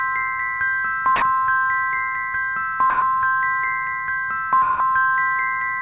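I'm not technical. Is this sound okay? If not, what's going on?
No. At 1.16 to 1.22 s, 2.90 to 3.02 s and 4.62 to 4.80 s, the sound briefly vanishes behind soft, steady noise for 60, 120 and 180 ms. This is sound dropped by the voice detector. The sender likely mistook the sound for background and paused, and the receiver filled the gaps with comfort noise. The call line carries nothing above 4 kHz, so the audio sounds narrow throughout.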